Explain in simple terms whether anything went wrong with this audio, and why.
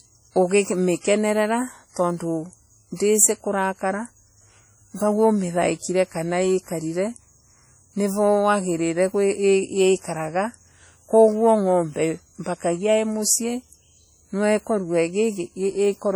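Yes. From start to finish the speech sounds smeared and watery, with a ringing around each sound and a hiss that swells and fades along with the talking. This is heavy damage that points to WMA compression, likely the older WMA 1 format squeezed hard to save space. To shrink the file, the encoder throws away quiet details and spreads its errors over short stretches of time, so sharp sounds blur and a washy haze clings to the speech.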